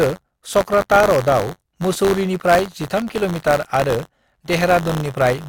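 Buffer tearing runs through the entire speech clip: the writer and reader of the playback ring buffer have drifted into each other, so every period contains a thin slice, a few percent, of audio roughly 20 ms old, butted against current audio with hard joins on either side. The result is a steady robotic rattle at about 93.8 Hz, which fits a 512-sample buffer, heard only while speech is present.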